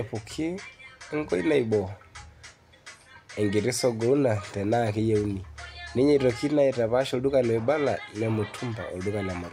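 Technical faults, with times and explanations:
No technical faults can be heard in this speech clip.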